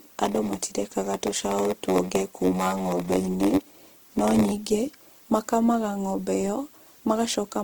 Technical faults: Opus compression; block size mismatch (padded)

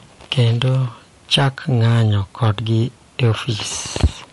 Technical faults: MP3 compression; hard clipping

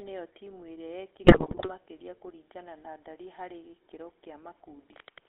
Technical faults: GSM full-rate codec; GSM bit errors

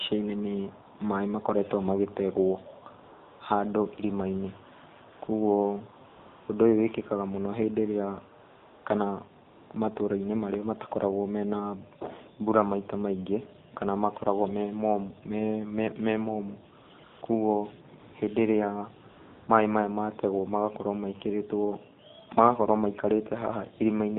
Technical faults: AMR narrowband mobile codec; AMR comfort noise

